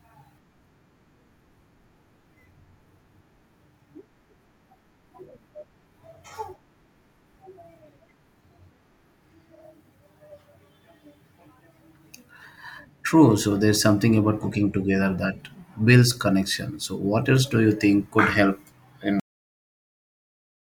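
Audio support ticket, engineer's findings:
Cut-off end at 19.20 s: speech stops mid-sound, digital silence to clip end at 20.78 s, no decay. Final buffers never written to file or played out. Waveform drops straight to a flat line; spectrogram shows a vertical edge, then blank.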